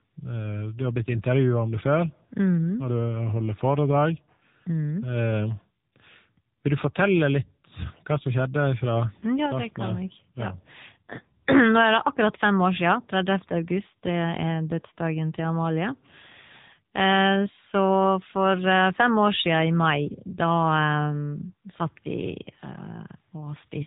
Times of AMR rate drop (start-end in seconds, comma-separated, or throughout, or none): none